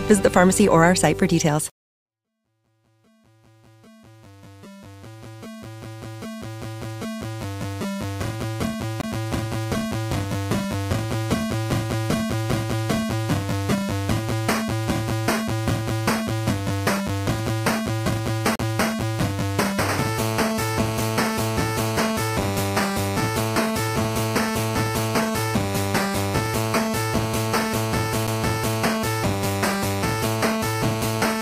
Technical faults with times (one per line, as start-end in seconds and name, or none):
9.01-9.04 CD skip
18.56-18.59 CD skip
28.27 CD skip